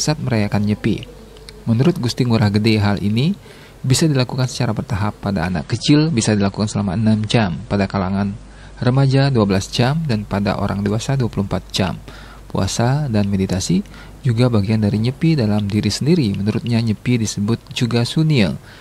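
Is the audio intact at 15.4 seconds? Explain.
Yes, at 15.4 seconds the audio is intact, with nothing breaking up, dropping out or distorting at that moment.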